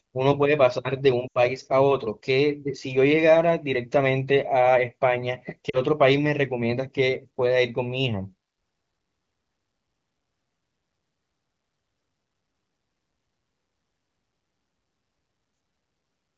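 Speech carried over a wideband AMR path is interrupted twice by lost AMR speech frames, at 1.27 to 1.38 s and 5.69 to 5.79 s. The decoder, missing good data, repeats the last pitch and vocal tract settings at falling gain. On a spectrogram the harmonics smear flat and fade, and the waveform envelope sags. The first, about 80 ms, fits four 20 ms frames; the second, about 40 ms, fits two.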